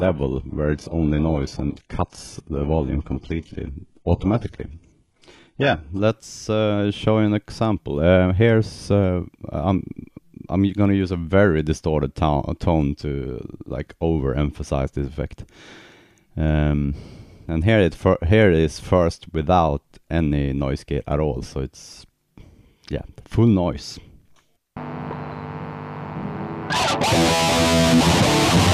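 Adaptive stream starting at a low bitrate, 0 to 6.0 s: the opening sounds dull with stronger codec artefacts, which fits a very low HE-AAC rate, then sharpens abruptly without a gap; nothing reaches above 11.5 kHz.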